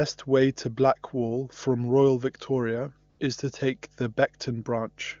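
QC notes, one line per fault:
Throughout: mains hum. A steady low tone at 50 Hz sits under the speech, roughly 35 dB below it, with some low harmonics. Power-line energy is coupling into the signal path, most plausibly through a ground loop or a nearby transformer.
3.09–3.19 s: AMR comfort noise. For about 100 ms just before "is to take the", the real background gives way to smooth synthetic noise. The sending phone judged that moment silent and stopped transmitting speech frames, and the receiver filled the gap with generated noise.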